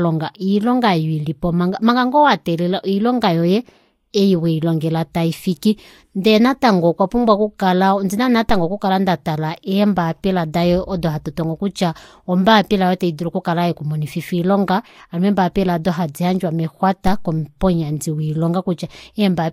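At 8.49 s and again at 17.07 s, a DC step shifts the waveform's zero line, then drains away through a 2 Hz high-pass, leaving a brief low thump under the continuing speech.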